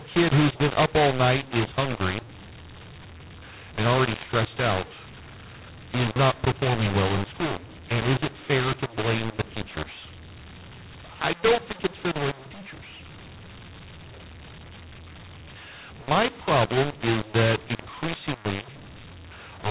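From start to finish the speech carries a mu-law and A-law mix-up: samples written with the mu-law companding curve are expanded as though they were A-law. Because the two logarithmic laws assign levels differently, amplitudes come back scrambled, some too loud and some too soft, and the quietest codes land well above silence. The result is harsh, gritty distortion on the speech and a noisy floor filling the pauses, within the 4 kHz ceiling of the 8 kHz telephone band.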